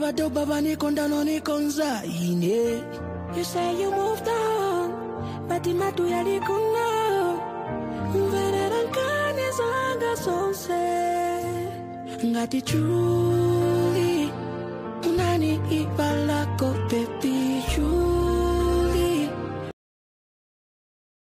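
Right at 19.71 s the clip hits a cut-off end. The sound is chopped off mid-stream, with no fade or natural decay, and drops straight into flat digital silence that runs for roughly the last 1.5 seconds. The final stretch of buffers never got written out, so playback just stops partway through the sound and leaves dead air for the rest of the file.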